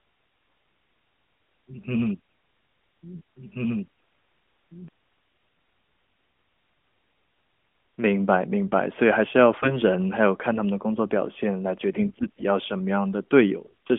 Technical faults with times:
3.36-4.88 doubled audio track
9.54-9.80 AMR bit errors
11.92-12.42 AMR bit errors
13.66-13.74 AMR bit errors

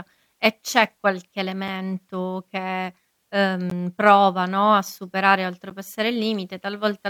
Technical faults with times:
1.68 gap between stream segments
3.70 gap between stream segments
5.70 gap between stream segments

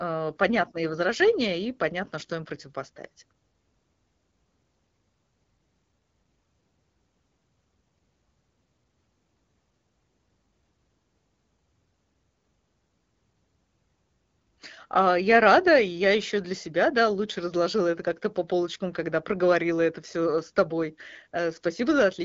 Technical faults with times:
none

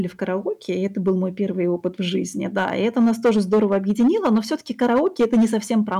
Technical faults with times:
0.00-6.00 hard clipping

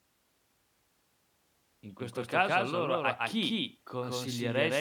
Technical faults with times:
0.00-4.80 doubled audio track

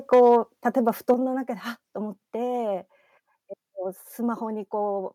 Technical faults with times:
0.13-0.37 microphone overload
0.14 microphone volume stepped down
0.88-1.12 microphone overload
1.14 microphone volume stepped down

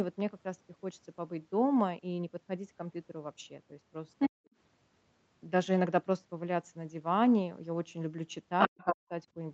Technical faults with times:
4.19-4.29 other side's voice leaking through
4.28-4.41 speech suppressed in double talk
8.59-8.96 other side's voice leaking through
8.68-9.14 speech suppressed in double talk

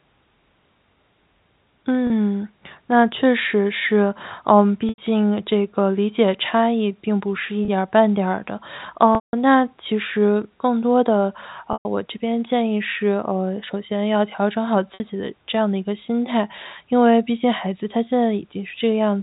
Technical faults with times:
2.07-2.10 packet loss with pitch repetition
4.89-4.98 packet loss with pitch repetition
7.65-7.68 packet loss with pitch repetition
9.15-9.33 packet loss with pitch repetition
11.73-11.85 packet loss with pitch repetition
14.94-15.00 packet loss with pitch repetition

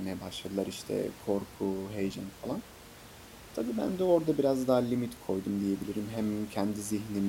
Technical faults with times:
none

